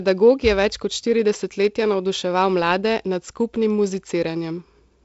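The speech has no technical faults, only the character of G.722 wideband telephone coding: nothing above 7.7 kHz, with a faint upper-band hiss and a slightly grainy lower band that point to the codec's 48 kbit/s mode.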